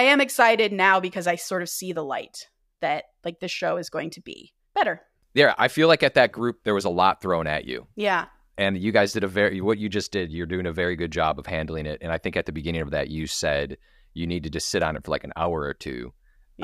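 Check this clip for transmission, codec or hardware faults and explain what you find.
No fault can be heard anywhere in the speech. Nothing in it calls for a technical explanation.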